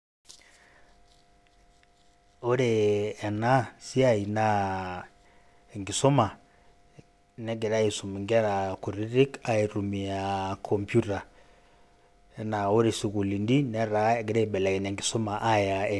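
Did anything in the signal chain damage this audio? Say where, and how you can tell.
Yes, aliasing from a sample-rate conversion, heard throughout. Sibilants turn gritty and metallic, with energy folding around 12 kHz, which fits an unfiltered drop to 24 kHz, roughly 30 dB down.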